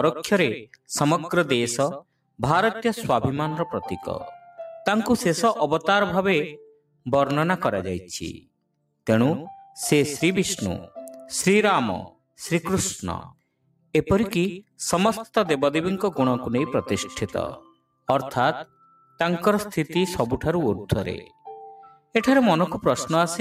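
Sound cut by the noise suppressor occurs eight times: 2.01–2.4 s, 6.72–7.06 s, 8.4–9.03 s, 12.11–12.38 s, 13.57–13.94 s, 17.61–18.08 s, 18.66–19.2 s and 21.88–22.14 s. Each time the suppressor mistakes part of the sound for noise and pulls it down, by about 18 to 19 dB at the deepest, or about 13 dB near 19 s. Those stretches sink in level or lose their tails for a few hundred milliseconds.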